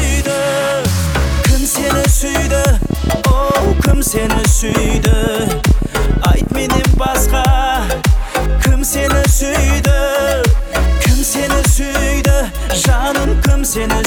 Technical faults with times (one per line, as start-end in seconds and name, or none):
2.82-7.07 train of clicks